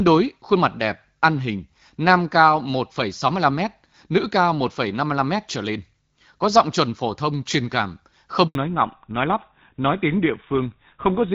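At 8.47 s the speech cuts out in a handover gap. The call moves from one network to another and no speech frames arrive during the switch, so the sound dies away within a few tens of milliseconds and stays silent for 80 ms, until 8.55 s. Unlike a packet-loss glitch, there is no smeared or repeated fragment filling the hole. It is a clean silence, and whatever was said in it is lost.

From 8.55 s to the end, the call has fallen back to narrowband. Before the gap, the HD Voice codec carries speech with light coding damage, with the clarity of a mid-rate wideband stream. After it, nothing above 4 kHz remains, so sibilants lose their edge and the speech turns duller and rougher, which fits a drop to a narrowband codec such as GSM full rate. What sets this apart from a simple low-pass filter is that the change arrives right after a handover and brings a coarser, buzzier coding texture with it.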